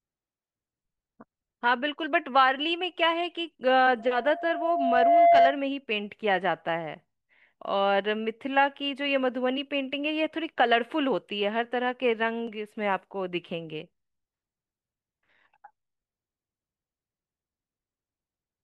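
From 3.99 to 5.61 s there is loudspeaker feedback squeal: the microphone re-amplifies its own loudspeaker output, and at 688 Hz the loop gain exceeds unity. A pure tone swells over about a second and a half to roughly 10 dB above the speech.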